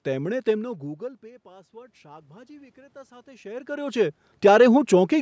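From about 0.62 s to 4.76 s you can hear automatic gain rising. The level at the microphone drops by about 24 dB, around the time the talker seems to move away near half a second in, and the gain control slowly pushes its gain up by about 7 dB to compensate. The voice and the room noise swell together over those four seconds, so the background creeps up right along with the speech instead of staying put.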